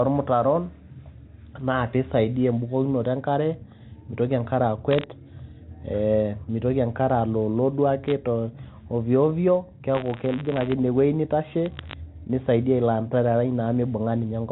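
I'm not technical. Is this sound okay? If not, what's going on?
No. Bit errors on a digital phone line: single damaged samples make sharp ticks and brief crackle at 4.91–5.04 s after "e nkare meitoki enkare", 8.04–8.12 s before "te ovyo ovyo", and 11.66–11.93 s. Buffer tearing from 9.94 to 10.74 s, between "te ovyo ovyo" and "ine wueji": the playback side briefly plays stale audio from roughly 40 ms earlier in place of new sound, producing a robotic 100 Hz buzz.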